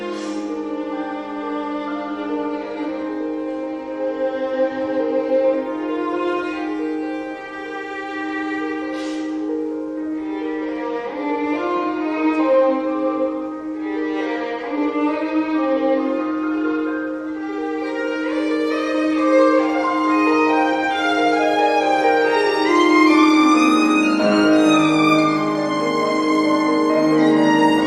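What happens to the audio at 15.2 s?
Nothing goes wrong at 15.2 s; the audio plays through that moment intact, with no dropout, click, glitch or other fault.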